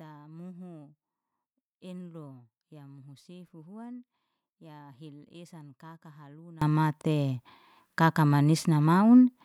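Speech recording in which, from 0.0 to 6.62 s, the mono sum drops by about 24 dB, leaving a faint residue. The likely cause is one channel inverted, so the shared centre content cancels when left and right combine.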